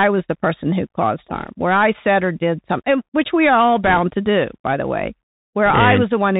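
Throughout the speech there is a muffled, narrowband quality with a grainy hiss, scratchy s sounds and roughness on loud peaks. This is the Bluetooth CVSD headset codec: nothing above 4 kHz survives, and its one-bit adaptive steps can't keep pace with sharp rises, which fits a 64 kbps CVSD link.

At 1.35 to 1.49 s, between "the person who caused" and "where I said or", a brief rushing crackle rides over the speech without any loud click. These are bit errors on a Bluetooth voice link, at an error rate of around one percent. Each flipped bit nudges the waveform only slightly, and the damage fades quickly. A stronger burst follows at 3.84 to 3.99 s, after "which we are all" and before "to do by the", with roughly two percent errors. A third comes at 5.66 to 5.82 s, after "do by the way", at somewhere between one and two percent.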